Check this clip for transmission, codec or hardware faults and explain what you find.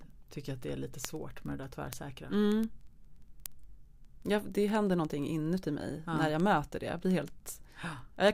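There's one fault here, and it runs almost the whole clip: word clock ticks from 0.10 s to 8.28 s. The receiving device isn't locked to the sender's clock. With the two clocks drifting apart by something like 400 ppm, they slip past each other about every 50 ms, and each slip drops or repeats a single sample. The result is a steady stream of sharp ticks, roughly 20 a second and around 150 in all, laid over the speech.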